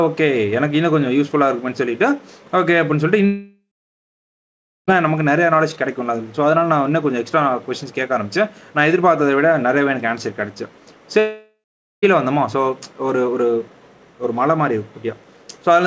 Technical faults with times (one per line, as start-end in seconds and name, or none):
3.26-4.89 long network dropout
11.19-12.04 long network dropout